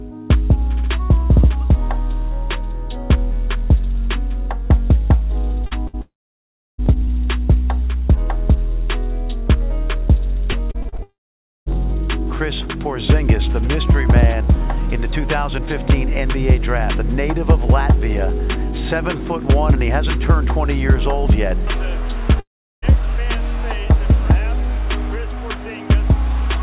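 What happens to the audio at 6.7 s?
At 6.7 s the sound is silent. It sits inside a gap from 6.01 to 6.80 s that is most likely a long network dropout. About 0.78 s of audio never arrived. The receiver stretched the last sound briefly, then let it fall silent for about 0.69 s. The audio returns at 6.80 s without the lost part.

This gap belongs to a wider stretch of repeated packet loss (robotic sound) from 5.66 to 6.88 s. Here the stream broke up three times, with the longest hole at 59 ms. Each hole was patched by repeating the last sound. The result is choppy, with pieces missing.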